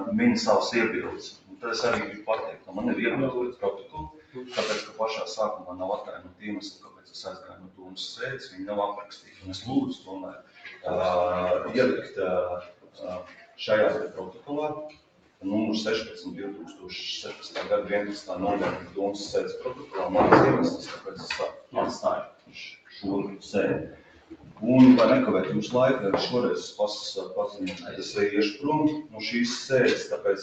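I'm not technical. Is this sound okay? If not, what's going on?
No. A noise suppressor built for voices on calls was left switched on, and it treats steady tones, lingering echoes and fading tails as unwanted noise. Throughout the clip, the noise suppressor applied to music or sounds makes the level swing noticeably, so the audio pumps and thins out.

At six points the suppressor mistook the sound itself for noise and turned it down hard: 1.17 to 10.85 s, 12.07 to 15.44 s, 16.68 to 16.86 s, 18.83 to 19.95 s, 20.97 to 24.63 s, and 27.49 s to the end. In each stretch, the sound cut by the noise suppressor sinks or fades early while sudden hits still come through.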